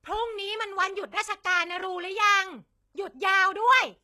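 Across the whole speech clip the treble sounds synthetic and gritty. Nothing is present above 12.3 kHz. The damage is plainly audible, and the likely cause is HE-AAC compression at a low bitrate, around 16 kbps. Upper bands are copied from lower ones, so harmonics misalign and sibilants turn metallic.

From 1.11 to 1.13 s there is pre-echo. A short hiss, about 20 ms long, runs just ahead of a sharp attack. The codec spread its noise across a whole block, filling the quiet gap before the onset. The attack itself sounds softened and smeared.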